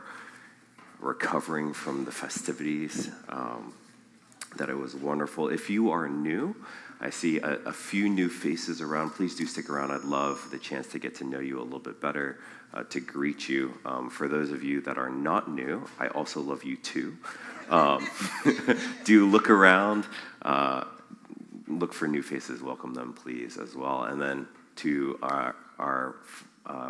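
No faults detected anywhere in the audio.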